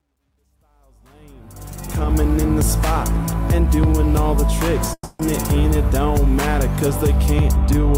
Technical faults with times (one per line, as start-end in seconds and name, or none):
0.00-2.16 truncation distortion on a fade
4.93-5.21 long network dropout